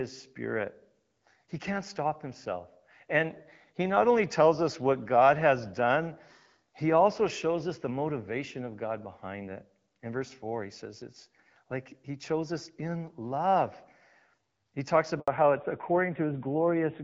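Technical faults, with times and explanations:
15.20 to 15.28 s, handover gap: the call gets passed from one network to the other and no speech frames turn up during the switch, so the voice just drops out for about 80 ms. Whatever was said in that stretch is gone for good.
15.28 to 17.03 s, fallback to narrowband: after the handover the call lands on the older narrowband codec, which points to something like 7.4 kbit/s AMR-NB in place of the 12.65 kbit/s HD Voice before. Nothing above 4 kHz survives, so the voice goes duller and rougher to the end.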